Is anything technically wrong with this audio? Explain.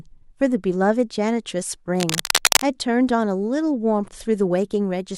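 Yes. From 1.98 s to 2.69 s the speech is overlaid with cable scratch noise, a dense, uneven crackling and rustling about as loud as the speech itself. The likely cause is a worn cable or connector being moved, so its contact resistance jumps about rapidly and injects irregular noise bursts. On a waveform this shows as spiky, jagged clusters riding on the signal; a spectrogram shows broadband vertical streaks scattered across that stretch.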